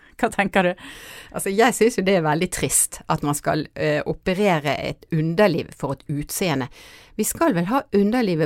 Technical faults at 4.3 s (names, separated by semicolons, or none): none